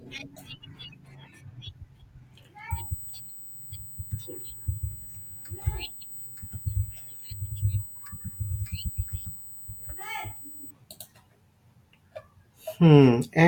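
USB whine runs from 2.71 to 10.71 s: a steady, fixed-pitch tone at 8 kHz, strongest at its 16 kHz harmonic, roughly 15 dB below the speech. It fits current drawn in 125-microsecond USB microframes leaking into the audio through shared power or ground.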